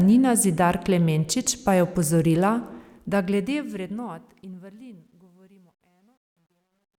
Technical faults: truncation distortion on a fade

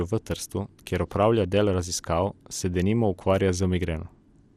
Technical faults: MP2 compression

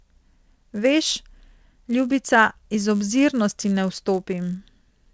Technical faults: resampler restarted on every block

